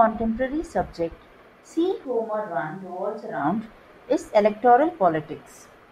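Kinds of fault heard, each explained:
Switch to a distant microphone: speech abruptly turns roomy, thin and about 10 dB quieter for a stretch, likely because a farther microphone replaced the close one.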